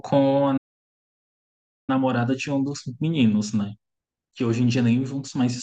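At 0.57 s the speech halts mid-flow and stays silent until 1.90 s, a gap of about 1.31 s, before picking up again. This is a playback stall, likely caused by the player running short of data or having its output thread blocked, so nothing reached the output until it recovered. Its length sets it apart from a brief dropout or click: rather than a momentary hole, the sound freezes for over a second.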